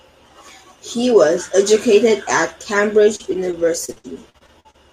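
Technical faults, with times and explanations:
3.03–4.76 s, repeated packet loss (robotic sound): right after "was educated at", the speech turns choppy, with clipped fragments. Audio kept dropping out in ten short gaps, the longest 56 ms, totalling about 340 ms. Each hole was patched by stretching the last sound, covering roughly a fifth of this stretch. Those repeated, looped fragments create the robotic tone, and some syllables stay partly missing.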